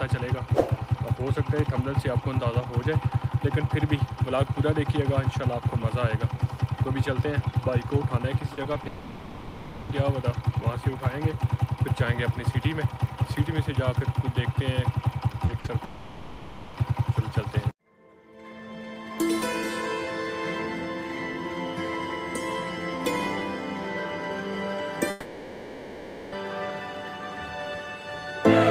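The audio carries a sequence of network transmission faults. From 8.53 to 8.87 s there is repeated packet loss, the robotic sound typical of an unstable link: four separate holes, none longer than 40 ms, each patched by extending the preceding sound, so about 29 percent of that third of a second is synthetic fill. The result is a choppy texture with small pieces of the original missing. It runs straight into the first long network dropout, 8.87 to 9.91 s, where roughly a second of audio is replaced by a continuation of the last sound that never falls fully to silence before the real signal returns, with that stretch absent. The same thing happens from 15.84 to 16.76 s and again from 25.10 to 26.34 s, each time a held, fading extension of the prior sound of about 0.9 s and 1.2 s respectively, most likely the receiver bridging a gap in which no packets arrived at all. Just before the second dropout, the stretch from 15.45 to 15.70 s shows clustered smaller losses. 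Short concealed packet loss at 15.45 to 15.51 s replaces 40 ms, and again at 15.66 to 15.70 s replaces 20 ms, each heard as a brief smear or wobble where the decoder extrapolated from the preceding pitch or noise and then crossfaded back into genuine audio. Between them, a burst of packet loss from 15.59 to 15.66 s removes about 40 ms of content, covered by 50 ms of decaying continuation, so the sound turns briefly into a held buzz or thinning hiss before resuming further along, with the intervening part gone.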